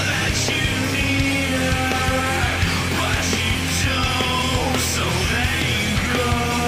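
No technical faults are audible anywhere in the recording.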